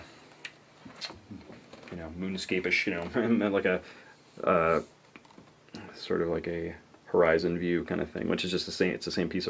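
No faults present; the audio shows ordinary call microphone processing, with the lowest bass trimmed by its high-pass filter and nothing above 8 kHz.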